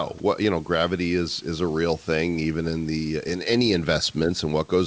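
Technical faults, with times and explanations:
0.18–0.20 s, sound dropped by the voice detector: a 20 ms stretch gives way to steady comfort noise, with about 10 ms of actual speech lost. The likely cause is the sender's voice detector briefly treating low-level sound as background and pausing transmission.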